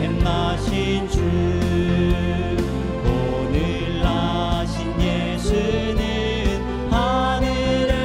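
No technical faults can be heard anywhere in the audio, and the signal holds steady and intact throughout.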